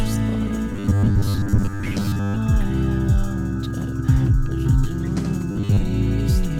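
Robotic sound from repeated short buffers appears from 0.72 to 2.38 s and again from 5.51 to 5.84 s. In both stretches the music collapses into a rigid, metallic buzz pinned at 100 Hz, which fits a roughly 10 ms slice being looped. The likely cause is new audio arriving too seldom, so playback fills the gaps by replaying its last buffer while fresh material is skipped. About 70% of the first passage and around half of the second are such repeats.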